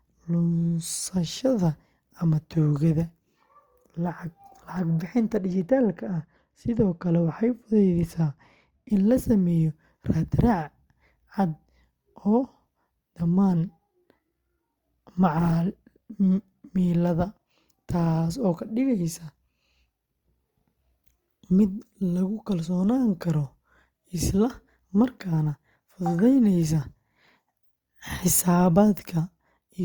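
Speech, with de-emphasis applied wrongly from 5.37 to 8.90 s: a treble cut meant to reverse pre-emphasis was applied to audio that had none, or was applied twice. It leaves 10 kHz about 10 dB below 1 kHz, so that stretch sounds dull and muffled.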